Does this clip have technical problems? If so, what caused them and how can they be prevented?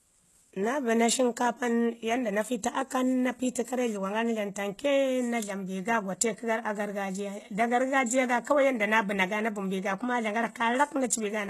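Yes. Throughout, s sounds are gritty and lispy, likely from HE-AAC compression, consistent with a bitrate near 16 kbps, rebuilding the treble from copied lower bands. A spectrogram shows smeared, repeated-looking upper bands ending at a hard ceiling at 12.3 kHz. To prevent it, encode at a higher bitrate with full-band AAC or Opus, or keep an uncompressed master.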